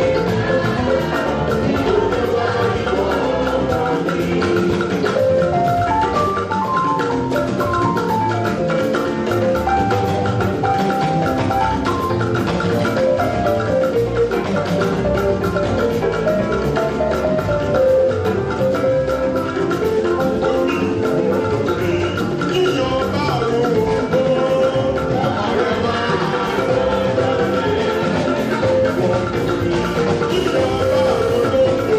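From 30.30 to 31.49 s a GSM phone buzz sits under the audio: a nearby 2G handset in a call transmits bursts at about 217 Hz, and the audio circuit rectifies them into a hard, raspy, harmonic-rich buzz about 19 dB below the signal. Unlike mains hum, it is steady but harsh rather than smooth.

From 31.52 to 31.89 s the buzz changes into GSM signalling bursts, as the phone drops to short groups of transmissions while its user falls silent. The result is even ticks with a longer 217 Hz buzz twice a second, somewhat quieter than the continuous buzz before it.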